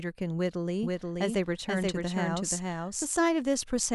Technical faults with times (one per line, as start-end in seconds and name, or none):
0.83-3.05 doubled audio track